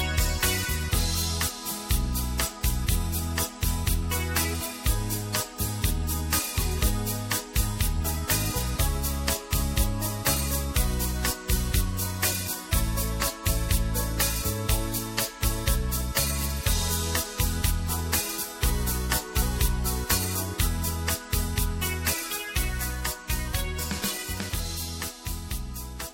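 No technical faults can be heard anywhere in the recording, and the signal stays steady and intact throughout.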